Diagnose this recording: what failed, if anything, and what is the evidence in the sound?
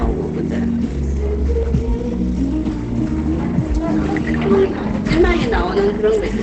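The codec stage is where this went wrong, and it runs the whole way through. Nothing in these everyday sounds gets above about 8.7 kHz, so the top end is simply gone, and what's left has a muffled, hoarse, plainly damaged quality. That's likely Opus compression at a low rate, something like 16 kbps, where the encoder falls back to its wideband speech-oriented SILK mode and models the sound rather than preserving it.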